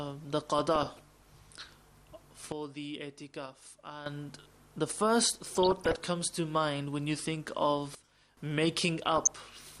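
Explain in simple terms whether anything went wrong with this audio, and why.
Throughout the clip the sound is dull and plainly gurgly, with a grainy roughness and a top end that seems to come and go. This is MP2 compression, the format used for digital radio, and it was likely squeezed into too little data. The encoder splits the sound into many narrow frequency bands and shares out a limited amount of detail among them, so the highest bands get switched off and the rest are stored only coarsely.

In three short bursts, from 0.59 to 0.99 s, 5.55 to 6.05 s and 9.02 to 9.27 s, the sound burbles. This is DAB burbling, which happens when weak reception lets a small share of bits arrive wrong and slip past the error correction. The damaged data puts short blips of noise into individual frequency bands, which produces that burbling noise.

The level also suddenly drops much lower from 2.52 to 4.06 s and again from 7.95 to 8.37 s, then jumps back up, with the background dropping and returning along with everything else. 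Each of these is a sudden gain jump. The volume changes instantly instead of sliding smoothly, and this was likely caused by a digital level setting being switched abruptly in the middle of the sound.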